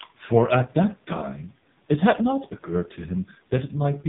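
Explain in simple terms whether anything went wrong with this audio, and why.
The voice sounds muffled, buzzy and robotic from start to finish, like a poor phone call, with nothing above about 3.8 kHz. That is the AMR narrowband mobile codec at its lowest quality: it cuts off the treble and rebuilds speech from a crude voice model.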